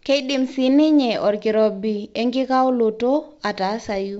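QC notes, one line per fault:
Nothing stood out on listening to this speech clip, which comes across as ordinary G.722 wideband telephone audio.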